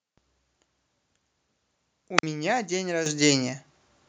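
At 2.18 to 2.23 s there is a wireless microphone squelch dropout. The radio link from an analogue FM transmitter weakens, and as the carrier sinks toward the noise floor a short burst of hiss rises. The receiver's squelch then closes and mutes the output for about 45 ms, leaving a near-silent gap before the speech returns. A digital packet dropout or a plain cable fault just cuts out; this one has that noisy lead-in followed by a squelched hole.

At 3.06 s the microphone volume is stepped up. The call software judged the input too quiet and raised the device's capture level in a single jump of about 9 dB. The speech and the room background become louder at the same instant and stay there. A gradual automatic gain ride or a compressor would swell the level smoothly. This is an abrupt, sustained shift that lifts the noise floor along with the speech.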